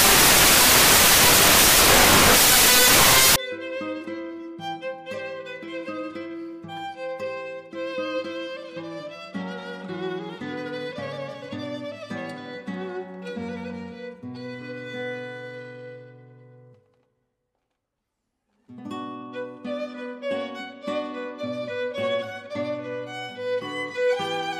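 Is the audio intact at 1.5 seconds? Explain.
No, at 1.5 seconds you're inside a stretch of samples built from the wrong bytes, running from 0 to 3.36 s: the byte order is scrambled, so the low bits dominate and it comes out as loud, harsh broadband noise.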